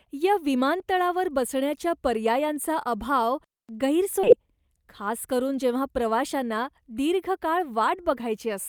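A skip ahead at 4.23 s cuts out roughly half a second of speech. The missing stretch was dropped while later audio was already queued, so playback jumps straight to the later material, and the two sides meet with no gap or fill.

Jitter buffer speed-up runs from 4.32 to 5.60 s. With too much audio held in the buffer, the receiver trimmed short pitch-period slices repeatedly, removing around 70 ms in total. The speech plays at about 106% speed with unchanged pitch and sounds slightly hurried.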